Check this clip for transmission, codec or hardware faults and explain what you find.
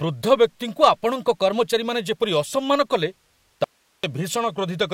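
Two faults turn up in this speech clip, one affecting speed and pitch and one a loss of signal.

From 0.81 to 1.61 s there is a drift correction step: the speech runs 5.76% fast and rises 97 cents, nearly a semitone, then snaps back. Likely cause: clock-matching software resampling in one jump. On a spectrogram, harmonics shift upward abruptly and drop back, like a stepped block.

From 3.64 to 4.04 s, an audio dropout to a faint residue cuts the speech for about 0.39 s, leaving only hiss some 45 dB down. The signal was likely lost while the downstream path stayed live. The waveform collapses to a thin noise band with hard edges, not a fade.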